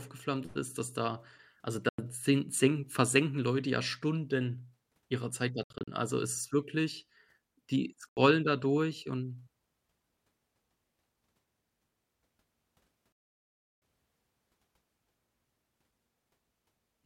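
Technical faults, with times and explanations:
1.89–1.99 s, 5.63–5.88 s, 8.09–8.17 s and 13.12–13.82 s, Bluetooth dropout: the speech falls silent for 93 ms, 147 ms (broken gaps spread over 240 ms), 80 ms and 693 ms, then resumes further along as though it had played on. The likely cause is audio packets reaching the headphones too late and being discarded.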